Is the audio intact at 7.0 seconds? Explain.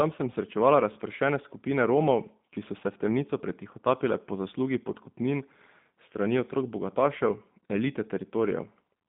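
No, at 7.0 s the speech carries G.729 codec damage throughout: rebuilt from a vocal-tract model at what sounds like 8 kbit/s, it's rough and synthetic, with nothing above 3.8 kHz.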